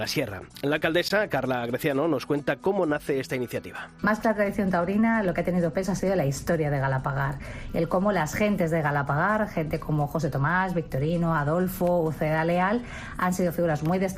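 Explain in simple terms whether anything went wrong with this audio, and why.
At about 1.09 s the sound drops to complete silence for roughly 17 milliseconds, a brief Bluetooth stall, likely from the wireless link briefly running out of audio to play. It's a clean gap of nothing, not a click, crackle or garbled burst.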